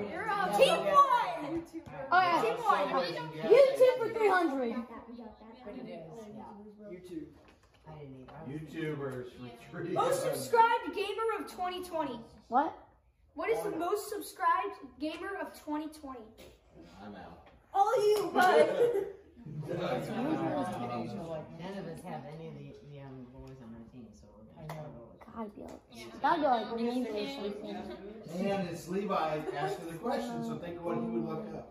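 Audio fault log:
Nothing stood out on listening, and no problem could be heard at any point in the audio.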